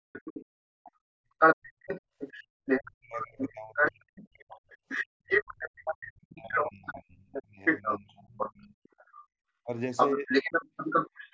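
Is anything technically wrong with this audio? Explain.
Yes. The speech dips out during speech suppressed in double talk at 0.00–0.44, 2.79–4.06, 6.35–8.48 and 9.65–10.30 s, by as much as roughly 40 dB. The likely cause is an echo canceller that could not separate the talker from the loudspeaker echo and turned both down. Unlike gating, the talker's own voice is what drops.

The other side's voice leaks through from 0.14 s to the end, sitting only a few decibels away from the talker. This is likely residual loudspeaker echo the canceller failed to remove. It is a second voice, not a level loss.

The background is gated by the echo canceller at 0.72–2.51, 4.77–5.25 and 9.14–9.37 s. The room sound falls by about 32, 35 and 25 dB while the loudspeaker plays. It is the room tone, not the speech, that vanishes and then returns. The call microphone processing's bandwidth limit, with nothing above 8 kHz, is expected and not a fault.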